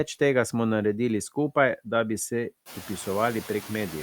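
Throughout the speech, the background noise dips slightly between phrases and swells back under them, a faint pumping rather than real cleanup. These are noise suppressor artifacts: the suppressor turns down bands it judges to be steady noise frame by frame, here by only about 2 dB. The room noise sits about 18 dB below the speech after it rises by about 18 dB at around two and a half seconds.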